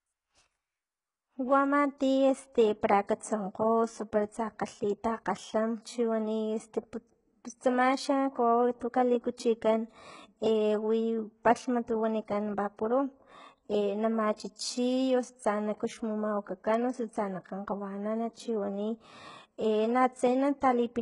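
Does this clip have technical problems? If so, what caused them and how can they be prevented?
Yes. Throughout the speech, the top end is bright yet false: sibilants sound gritty and lispy, and the treble's harmonics fail to line up with the voice below. The likely cause is HE-AAC compression, whose spectral band replication rebuilds the treble by copying lower bands upward under a coarse envelope. The heavy damage points to a very low bitrate, around 12 kbps. A spectrogram shows nothing above 11.1 kHz, with blocky, repeated-looking texture in the upper band. Encoding at a higher bitrate, or with plain AAC, prevents it.

At 14.37 to 14.39 s there is pre-echo: a short hiss of about 21 ms arrives before a sharp attack, which sounds softened. The codec spread the quantisation noise sized for the loud onset across its whole block, including the quiet stretch just before it. On a waveform, low-level fuzz rises ahead of the transient, and a spectrogram shows a broadband smear leading into it. 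A codec with shorter transform blocks at attacks, or a higher bitrate, prevents it.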